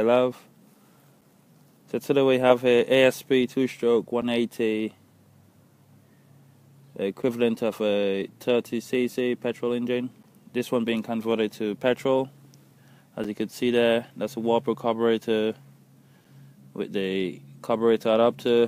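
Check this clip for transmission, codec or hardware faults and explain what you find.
There's one kind of fault here, a gap between chunks, showing up twice. At 4.22 s and again at 13.24 s the audio drops out for about 7 ms and then carries on. The sound seems to have been delivered in pieces, and each time a join is reached a sliver of silence is inserted before the next piece starts. The two holes are 9 s apart, which fits 3-second chunks. Nothing is actually lost; the sound is just interrupted, so you hear a very brief hole of silence at each point.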